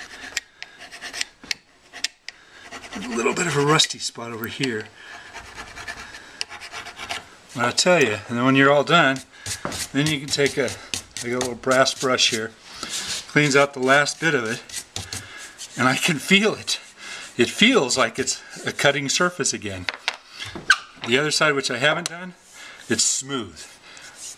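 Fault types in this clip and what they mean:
Electrical switching spike, 4.44 s and 8.02 s: two sharp snaps at about -15 dBFS, likely a nearby switch or motor arcing into the audio line.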